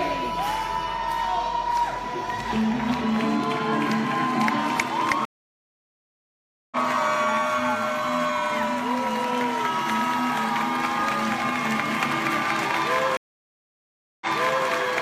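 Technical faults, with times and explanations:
5.25–6.76 s, stream reconnect: about 1.46 s of silence, then the audio resumes roughly 0.7 s further on, skipping material rather than continuing like a plain dropout.
13.17–14.68 s, stream reconnect: 1.04 s of silence, after which a fresh decoder restarts 0.46 s earlier, replaying audio already heard before the break.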